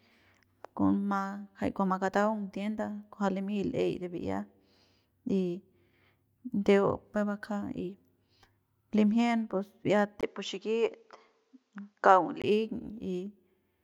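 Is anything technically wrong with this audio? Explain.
Yes. From 10.21 to 12.44 s, just after "limjien bi'iat", the speech turns dull above 7.6 kHz after a 20 ms gap, with faint new background noise but no real level change, likely the input switched to a poorer device. The gap and changed noise set it apart from a simple filter change.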